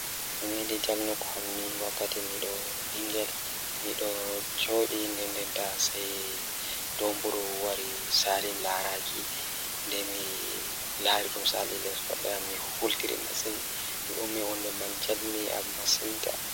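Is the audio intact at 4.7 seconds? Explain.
No: low bit depth with dither runs throughout, including at 4.7 s. The speech is reduced to about 4 bits with dither, so the rounding error becomes a steady, even hiss, roughly as loud as the speech itself.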